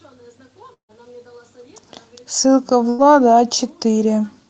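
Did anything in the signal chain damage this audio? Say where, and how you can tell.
Yes, at the network stage. From 0.73 to 0.94 s the speech stops dead: the last sound is stretched into a fading buzz or hiss, about 150 ms of fill that ends in roughly 110 ms of near silence. It resumes with about 120 ms missing, likely a long network dropout.

At 1.50 to 1.81 s the jitter buffer speed-up kicks in. The receiver had banked too much audio, so it snipped out pitch-period-sized chunks, around 40 ms in total. Speech runs at 112% speed with unchanged pitch and sounds hurried.

There's a burst of packet loss from 2.89 to 3.04 s. About 92 ms gets filled by stretching the last sound into a held buzz or a fading hiss. Then the speech picks up again with roughly 60 ms gone.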